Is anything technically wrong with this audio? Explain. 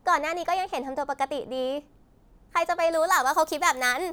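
Yes. From 2.93 s to the end at 4.12 s, the speech has pre-emphasis left on. The treble boost, shaped like the 75 µs FM curve, was never undone by de-emphasis. Highs sit about 14 dB above 1 kHz at 10 kHz. It sounds thin, bright and sibilant.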